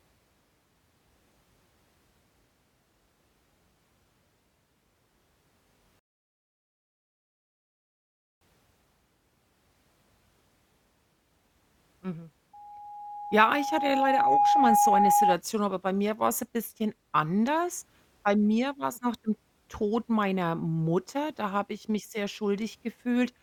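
Speech recording with two faults. A rebuffering stall occurs when the player runs out of downloaded audio: the speech drops to silence from 5.99 to 8.41 s, then picks up exactly where it stopped, adding 2.42 s. Loudspeaker feedback squeal follows when the microphone picks up its own loudspeaker and the loop gain exceeds one at 825 Hz. From 12.53 to 15.37 s that single tone swells over about two seconds to roughly 5 dB above the speech, ending just before "aber bei mir war".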